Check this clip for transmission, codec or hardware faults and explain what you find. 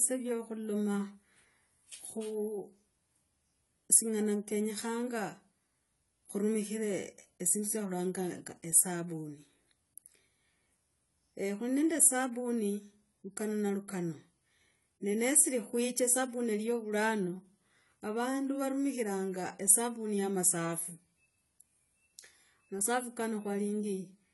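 One codec fault runs through the whole clip. The likely cause is AAC compression: an AAC-LC encoder short of bits, consistent with roughly 32 kbps, has discarded everything above 11.5 kHz and coarsely quantised the rest. The speech sounds dull and smeared, with an audible warble and fizzy sibilants.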